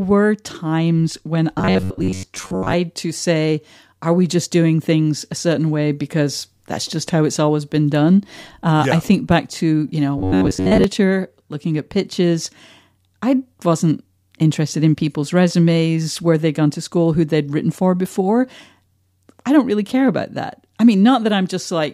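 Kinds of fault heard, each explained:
Robotic sound from repeated short buffers: Twice the speech turns into a rigid, metallic buzz pitched near 94 Hz, from 1.59 to 2.73 s after "times when" and from 10.18 to 10.84 s after "back to you know". The likely cause is audio arriving too seldom, so a slice of about 10.7 ms is looped to fill the gap. Most of the real sound in those stretches is skipped, and the phrasing is only roughly kept.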